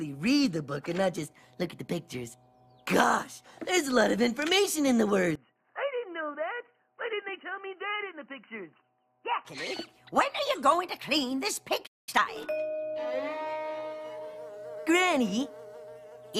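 From 5.35 s to 9.45 s the sound turns dull and boxy, with a level drop of about 10 dB. This is likely an input switched to a poorer device. On a spectrogram the upper bands vanish abruptly at 5.35 s with no gap.

At 11.86 s the output cuts out for about 0.21 s, until 12.09 s. This is likely a playback stall, where the player was starved of data or blocked. The waveform shows a flat line and the spectrogram an empty vertical strip.

From 12.09 s to 12.29 s a time-compressed catch-up follows. The audio runs at twice normal speed with unchanged pitch as small pieces are cut and cross-faded. On the spectrogram, events are squeezed closer together while harmonic spacing stays the same.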